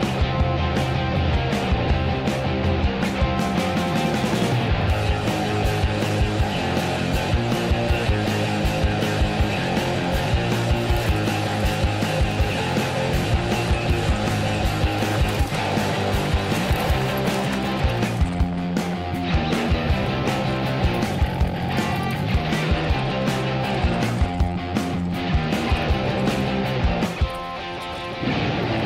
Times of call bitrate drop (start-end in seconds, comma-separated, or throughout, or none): none